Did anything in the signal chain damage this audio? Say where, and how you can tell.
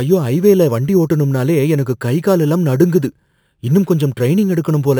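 Yes. The damage is at the sample-rate conversion stage. Throughout the speech, a bright metallic fizz rides about 26 dB below the signal, filling the 6 to 12 kHz band. That is imaging from sample-and-hold upsampling, which fits a 12 kHz source held up to 48 kHz without filtering.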